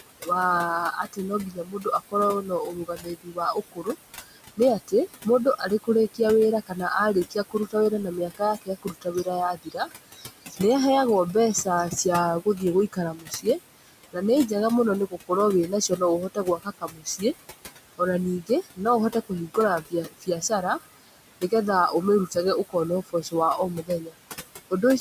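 Throughout this speech recording, the background noise drops away in the pauses and swells back under each phrase. These are noise suppressor artifacts. The suppressor treats the room noise, which sits about 12 dB below the speech, as steady noise and pulls it down by about 19 dB frame by frame, so the noise floor pumps with the talking instead of holding still.

In places the speech itself goes faint. Parts of the speech sound swallowed between 0.04 and 0.29 s, 0.92 and 10.61 s, 11.34 and 14.52 s, 15.07 and 17.23 s, and 17.76 and 24.17 s. This is speech cut by the noise suppressor. It mistakes quiet parts of the speech for noise and turns them down by about 20 to 22 dB at worst. The longest stretch, from 0.92 s, loses roughly four seconds in total, and the later spans lose under a second to about two seconds each.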